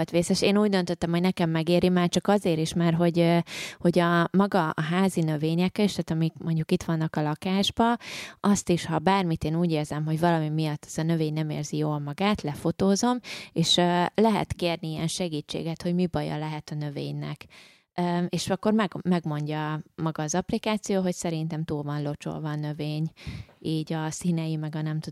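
No faults are audible anywhere in the speech recording.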